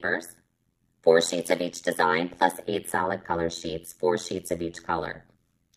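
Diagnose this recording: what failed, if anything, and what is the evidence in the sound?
Overlap-add ripple from a frame-based processing stage runs throughout: the level pumps at around 100 per second, a deep metallic buzz with extra tones around each note. Frames were windowed and rejoined with an overlap whose gains don't sum flat, dipping about 60 dB each frame. The waveform shows regular notches; a spectrogram shows vertical striping.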